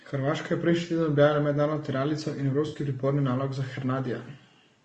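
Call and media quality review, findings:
Speech rough and grainy throughout, noise between harmonics, thin synthetic top band. Likely low-delay AAC compression (AAC-ELD), fits about 32 kbps. Steady, unlike an intermittent network fault.

AAC frame loss with concealment, 2.67–2.77 s, between "tiralico in" and "priporni nalog za": smeared, phasey patch, fits three 20 ms frames. Again 4.23–4.26 s after "priporni nalog za": one frame. Filled in, not silent like a dropout.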